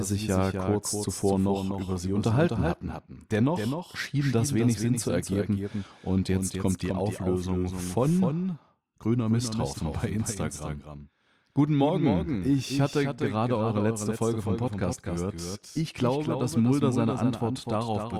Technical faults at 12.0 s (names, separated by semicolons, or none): doubled audio track